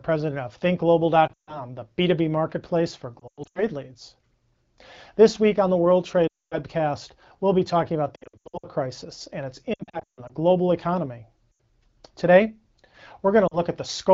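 Lost AMR speech frames break up the speech at 1.27–1.62 s, 3.20–3.63 s, 6.27–6.58 s, 8.16–8.66 s, 9.74–10.33 s, 11.52–11.59 s and 13.47–13.58 s. Corrupted frames failed their check, so the AMR-WB decoder, running at 12.65 kbit/s, filled each gap by repeating the last good pitch and vocal tract settings at falling gain. Scattered losses warble and dip. Runs of up to 240 ms drop the speech to near silence within two frames, and the voice returns briefly thin and rough.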